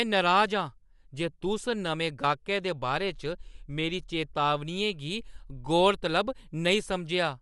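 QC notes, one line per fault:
Throughout: Bluetooth LC3 compression, likely the cause of the damage here. The speech has passed through a transform codec working in 10 ms frames at a rate that sounds like around 48 kbps, and nothing survives above 11.5 kHz. Upper spectral detail has been discarded and replaced with synthetic noise, so the voice takes on a plainly audible breathy, grainy edge, while the band is simply cut off above that point.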